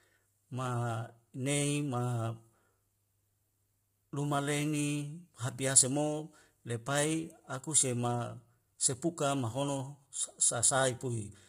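Low-delay AAC compression, likely AAC-ELD at a low bitrate near 24 kbps, runs throughout: its short frames resolve pitch harmonics poorly, so the speech sounds heavily rough and grainy, with noise filling between harmonics and nothing above 15.6 kHz.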